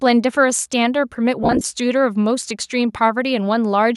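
From 1.43 to 1.64 s the speech breaks up with lost LE Audio frames. About 120 ms of audio drops out in short gaps, the longest around 30 ms. The decoder fills each gap by repeating recent spectrum with scrambled phase, so the speech turns briefly into a rough, noisy smear.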